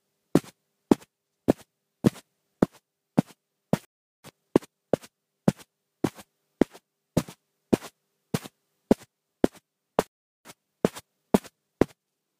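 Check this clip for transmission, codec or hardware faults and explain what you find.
Two playback stalls occur, each followed by time-compressed catch-up. At 3.85 s the sound stops for about 0.39 s, and at 10.07 s for about 0.38 s. This is a playback stall, likely from the player running out of buffered data. The audio then resumes where it stopped.

Time-compressed catch-up follows each stall, from 4.24 to 5.02 s at 1.5 times speed and from 10.45 to 12.35 s at 1.15 times speed. The player trims and cross-fades small pieces to clear its backlog. Pitch stays normal, but the sound is hurried.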